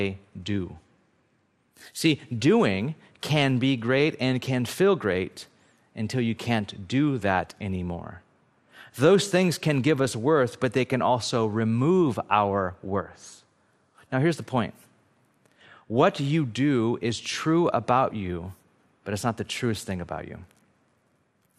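From start to finish the speech sounds dull, with a gurgling, granular grit: likely MP2 compression at a low rate near 80 kbps. Starved of bits, upper sub-bands are switched off and the rest coarsely quantised, so a spectrogram shows ragged high-frequency blocks flickering in and out.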